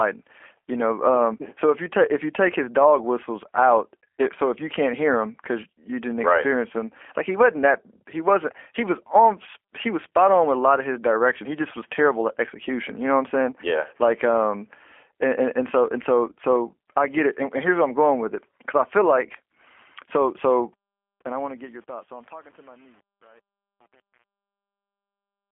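From start to finish the speech carries G.729 codec damage, plainly audible. Everything above 3.5 kHz is gone, leaving a narrow telephone band. Rebuilding the voice from a filter model and sparse pulses, which fits an 8 kbit/s stream, makes it rough and synthetic throughout.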